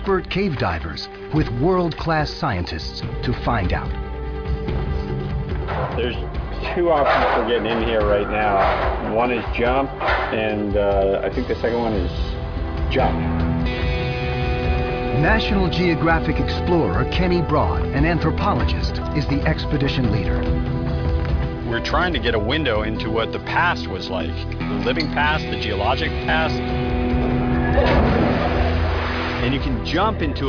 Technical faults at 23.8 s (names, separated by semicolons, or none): none